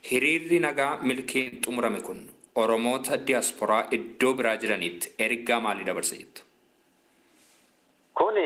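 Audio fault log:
1.41–1.48 s, short stall from a late packet: a packet didn't turn up on time, so the jitter buffer ran dry and the receiver stretched the last bit of sound for about 46 ms until it arrived, then picked up right where it left off. Nothing is actually lost here. You hear a held-over sound, a stretch that doesn't belong, and the playback ends up running about 46 ms later than before.
1.48–1.54 s, short concealed packet loss: right after the stall, about 40 ms of audio never made it to the decoder in time, so that stretch really is gone. The receiver covered the gap by carrying the last sound forward, either following its pitch or as shaped noise, and then blended back into the real audio. The result is a short smear or wobble across those 40 ms, directly following the stretched moment.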